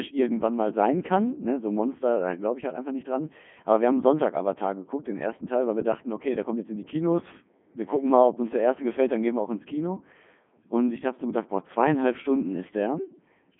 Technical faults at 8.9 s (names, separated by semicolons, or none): Codec 2 vocoder